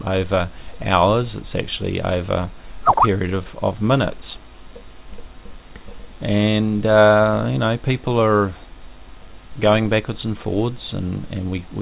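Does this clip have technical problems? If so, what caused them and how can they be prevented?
No, this clip has no technical problems, so there is nothing to prevent.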